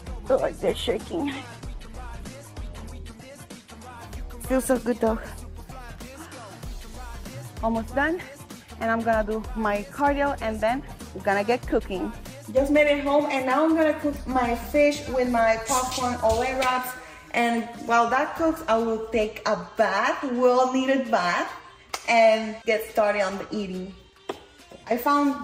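From 0 to 4 s, an adaptive stream starting at a low bitrate leaves nothing above 12.2 kHz and stronger codec artefacts, which fits a low-rate Opus stream, before quality jumps up without a gap.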